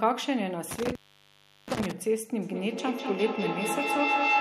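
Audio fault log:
0.71–1.92 s, intermittent contact: the line drops out for about 0.73 s with a crackle at each edge where a loose plug or cable briefly loses connection, leaving only faint background hiss while it's open before the sound snaps back.
2.42–4.40 s, feedback echo between two devices: the speech keeps coming back about every fifth of a second and builds to about 3 dB above the speech itself. Two devices on the call are replaying each other, and neither echo canceller removes the other's output.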